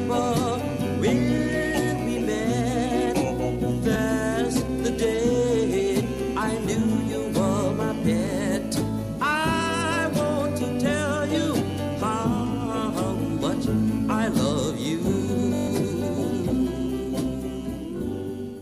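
Bluetooth stutter hits at 3.94 to 3.96 s as a brief ~20 ms hiccup, then at 15.56 to 15.68 s as a buzzy machine-gun run, and again at 17.98 to 18.00 s as another brief ~20 ms hiccup. Late or lost packets made the receiver replay its last slice, roughly six packets' worth in the run, before jumping ahead.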